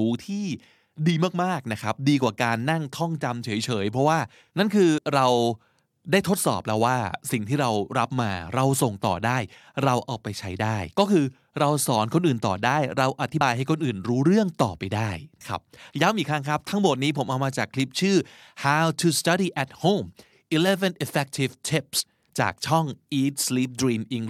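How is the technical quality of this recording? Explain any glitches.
The speech has four brief skips where compressed frames were skipped, at 4.97, 13.40 and 15.40 s, and from 21.99 to 22.01 s. Each time the audio jumps ahead by roughly 70, 70, 100 and 50 ms, which fits whole frames of about 23.2 ms going missing.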